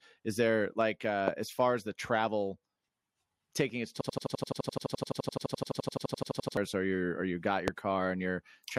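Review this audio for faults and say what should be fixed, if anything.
There are two kinds of fault here, and both need fixing.

Loud pop: There's a sharp single pop at 1.28 s, right after "there like" and before "as far as the," and another at 7.68 s, just after "you're or you got." Each peaks at something like 20 dB above the speech, which keeps going underneath. It sounds like a voltage step or pulse got into the chain, likely from a plug, switch or static discharge. To prevent it, secure cables and avoid switching or touching gear while recording.

System hang loop: From 4.01 to 6.57 s, right after "taking its" and until "or you're or you," the playback freezes and one 85.33 ms slice of audio repeats about thirty times. That gives a machine-gun stutter at roughly 11.7 Hz. The computer or driver stalled while the sound hardware kept cycling the same ring buffer, and the loop length fits a 4096-sample buffer. 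About three seconds of real audio are lost, so that stretch will need re-recording. To prevent it, fix the driver or system stall and give the audio process enough priority and CPU headroom.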